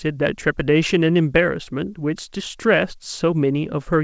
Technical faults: none

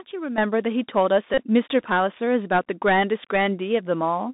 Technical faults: Bluetooth CVSD headset codec; sudden gain jump; Bluetooth headset packet repeated

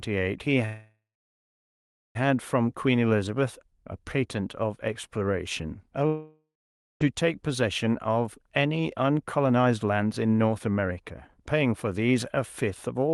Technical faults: call audio freeze; long network dropout; jitter buffer speed-up

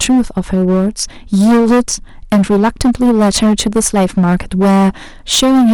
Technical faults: hard clipping

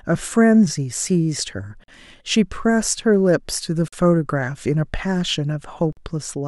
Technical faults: gap between chunks

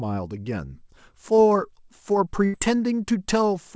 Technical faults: short concealed packet loss; burst of packet loss

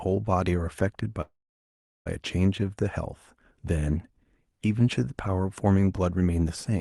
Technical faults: call audio freeze

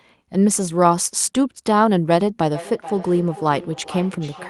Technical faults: feedback echo between two devices

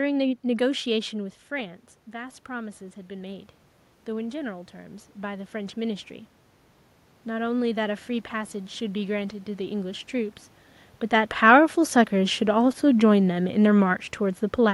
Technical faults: automatic gain rising

